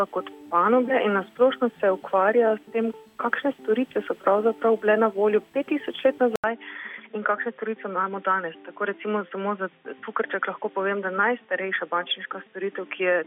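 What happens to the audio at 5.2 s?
Nothing goes wrong at 5.2 s; the audio plays through that moment intact, with no dropout, click or distortion.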